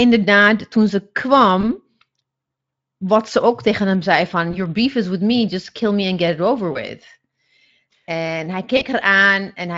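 Speech clip with four short dropouts from VoIP packet loss concealed by the speech codec, near 1.61 to 1.70 s after "toen ze", 4.51 to 4.59 s between "tegen hem zei van" and "beef is with me", 6.73 to 6.78 s, and 8.77 to 8.85 s. Each gap fits about 20 ms of missing audio, 40 ms for the last one. The decoder fills it by stretching the previous pitch and filter into a brief buzzy tone or coloured noise that fades, and the voice stays weak or distorted just after. The Speex coding underneath adds only a light roughness.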